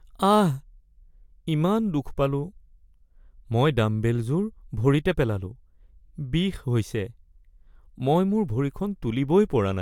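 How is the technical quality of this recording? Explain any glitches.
No technical glitches can be heard anywhere in the recording, and the signal stays steady and continuous throughout.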